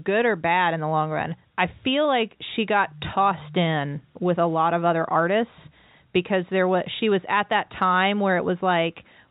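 No technical faults can be heard anywhere in this speech recording. It carries the character of G.711 telephone coding, with nothing above 4 kHz and at most a faint quantisation hiss that rises and falls with the level of the sound.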